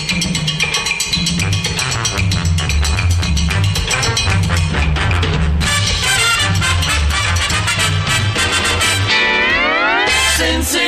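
No technical faults can be heard anywhere in the audio.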